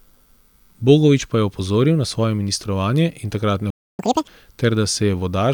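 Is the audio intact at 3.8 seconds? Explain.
No. At 3.8 seconds the speech has dropped into silence: a playback stall runs from 3.70 to 3.99 s, cutting the sound off mid-flow for about 286 ms before it resumes. The likely cause is the player running short of data or its thread being blocked.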